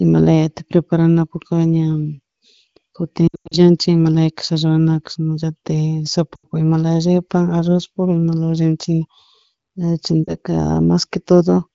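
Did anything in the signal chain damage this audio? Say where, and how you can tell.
Yes. Lost AMR speech frames on the radio link: at 3.27–3.57 s, 6.36–6.46 s and 10.24–10.35 s the speech drops to near silence as the AMR-WB decoder repeats its last good pitch and vocal tract settings with falling gain. The first gap is longest, with runs up to 100 ms.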